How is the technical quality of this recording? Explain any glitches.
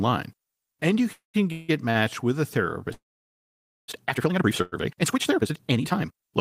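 The recording has clear transmission and processing faults: four call audio freezes, one short stall from a late packet, and a time-stretched section that runs to the end.

Call audio freezes occur at 1.13–1.36 s, 1.52–1.70 s, 2.93–3.90 s and 4.62–4.74 s. The likely cause is packets held up in transit until the jitter buffer ran empty. The receiver carries the last sound on as a fading buzz, which drops to silence for about 140 ms in the first freeze and about 890 ms in the third. Each time the audio resumes where it stopped, so nothing is lost, but pauses of 213, 166, 952 and 100 ms are inserted.

The short stall from a late packet is at 1.90–1.97 s. A single packet missed its playout time, and the receiver stretched the preceding sound for 44 ms until it arrived. It then continued from the same point, so nothing is missing. The result is one sound held slightly too long, with a faint buzz or dip.

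The time-stretched section runs from 2.82 s to the end, playing at 1.98 times normal speed with the pitch unchanged. Processing likely squeezed this part to fit a target length by dropping short pieces of the waveform rather than resampling. The pace jumps abruptly at 2.82 s, and from there the audio sounds rushed, with the later freezes falling inside this compressed span.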